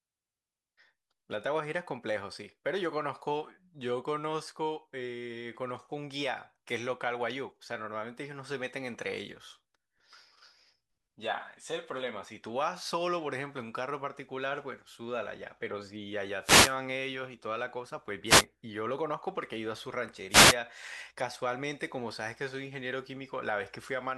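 Three wireless microphone noise hits break into the speech at 16.40 to 16.76 s, 18.25 to 18.45 s and 20.29 to 20.56 s, each a brief swish of static as the radio signal fades and receiver noise surges through.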